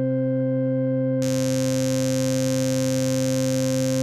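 From 1.21 s to the end, mains buzz at 50 Hz rasps under the music, fairly loud. Its sharp switching spikes, with harmonics reaching several kilohertz, separate it from a smooth hum.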